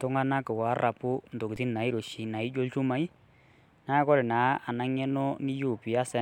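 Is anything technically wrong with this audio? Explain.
Yes. At 1.56 s a brief low thump is heard while the speech goes on: a DC step, where the waveform's zero line suddenly shifts by about -35 dBFS and then fades back through a 20 Hz high-pass.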